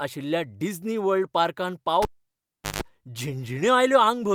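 At 2.02 s a sharp pop cuts the speech into near silence for about 750 ms, including roughly 155 ms of 50 Hz mains buzz, then a second pop as sound returns at 2.82 s: a cable pulled and plugged in while live, buzzing as only the tip made contact.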